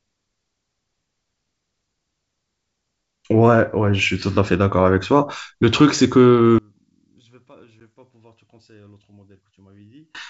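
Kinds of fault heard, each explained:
One channel inverted: From 6.58 to 10.15 s the speech drops by about 33 dB and nearly vanishes. The likely cause is one stereo channel with reversed polarity. When both channels are summed to mono, the shared centre content cancels and only their small difference remains.
Packet loss on an ADPCM call: At 7.80 s a hard-edged silent gap of about 10 ms cuts into the speech, which fits roughly one lost packet. The gap was filled with silence. The decoder's adaptive predictor and step size then no longer matched the sender's.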